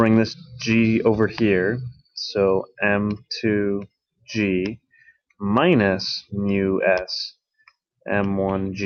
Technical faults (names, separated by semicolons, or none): none